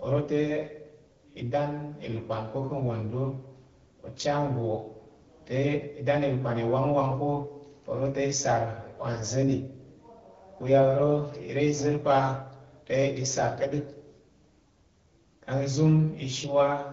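From 9.13 to 9.30 s, just after "te i sar wa", AMR bit errors on a few percent of the weaker bits, roughly eight 20 ms frames' worth, misplace excitation pulses and skew the AMR-WB decoder's gain and spectral values. The sound turns hoarse and gargly; a spectrogram shows smeared, noisy harmonics with level roughly held.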